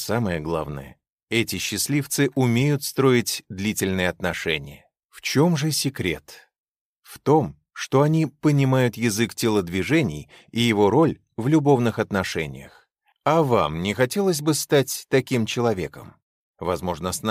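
Nothing in the clip stands out as a technical problem, so there's nothing to flag here.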